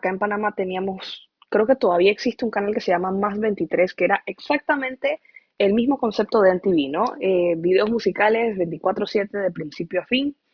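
Aliasing runs through the whole recording. The speech appears to have been resampled down, most likely from 44.1 kHz to about 11 kHz, with no low-pass filter ahead of the conversion, so content above the new 5.5 kHz limit folds back down into the audible band at unrelated frequencies. Sibilants sound gritty and metallic, and the spectrum stays full right up to the 5.5 kHz edge, with the folded components sitting roughly 30 dB below the speech.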